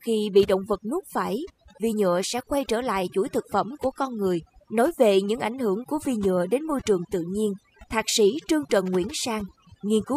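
Overdone noise removal runs throughout this speech recording: an over-aggressive noise reducer mutes bands near its noise estimate, leaving near-silent, twinkling background and stripping away quiet parts of the speech.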